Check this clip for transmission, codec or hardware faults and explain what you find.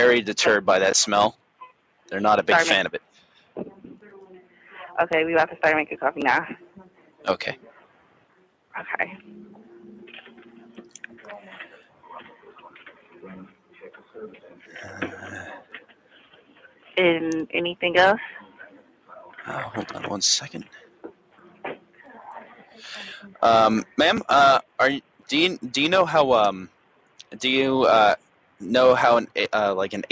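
A speech-tuned noise suppressor was left running on non-speech sound for the whole clip, and it repeatedly pulls parts of the sound down.

The noise suppressor applied to music or sounds is active throughout. It treats sustained tones, ambience and reverberant tails as background noise and attenuates them, letting sharp onsets pass more readily. The resulting gain swing is roughly 10 dB, so levels pump and flutter as the suppressor opens on attacks and closes on held material. The sound comes across thinned and unsteady.

Sound cut by the noise suppressor occurs in five stretches: 1.33–4.74 s, 6.6–16.96 s, 18.42–19.38 s, 20.64–25.29 s and 26.68–29.36 s. The deepest drops are about 10 dB in the first stretch and about 11 dB in the others. The affected portions total a second or two in most stretches and several seconds in the long 6.6–16.96 s span. Steady or decaying components sink in level and their tails end early, while transients survive. 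The call microphone processing path is also present, with nothing above 8 kHz.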